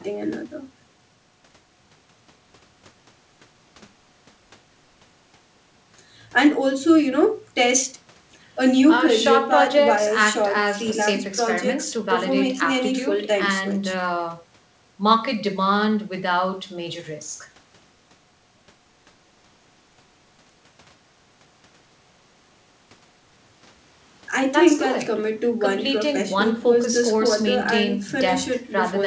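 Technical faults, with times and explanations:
No technical faults are present.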